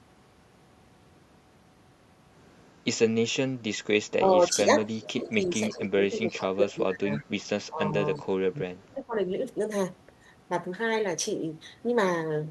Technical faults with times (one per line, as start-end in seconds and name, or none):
4.19-6.02 speech suppressed in double talk
4.87-5.08 echo leak
5.51-5.78 echo leak
6.30-6.44 echo leak
6.33-7.38 speech suppressed in double talk
7.18-7.25 echo leak
7.69-9.15 speech suppressed in double talk
8.15-8.20 echo leak